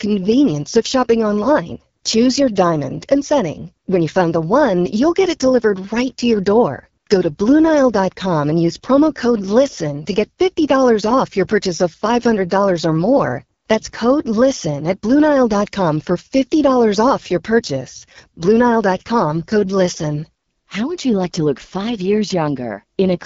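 Speech throughout carries AMR wideband (HD Voice) codec damage: a rough, raspy texture fitting a low rate near 8.85 kbit/s, with content ending near 7.5 kHz rather than narrowband's 3.4 kHz.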